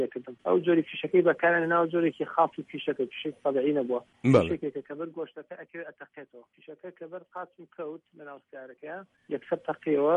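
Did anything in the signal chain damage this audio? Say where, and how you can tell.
No, nothing in the signal chain damaged this audio.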